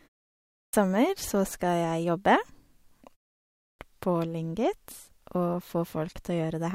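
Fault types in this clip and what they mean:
Clipped start after a pause: the output device sleeps through silence and wakes late, so speech after both pauses starts abruptly, missing its first 0.28 and 0.29 s.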